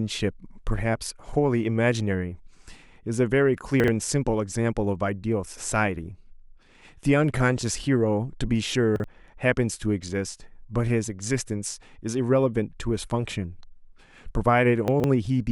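At 3.8 s, 8.96 s and 14.88 s, chunks out of order: a block of audio, apparently about 40 ms long, was delivered late and played after its successors, one chunk late twice and three chunks late at 14.88 s, producing brief jumbled speech.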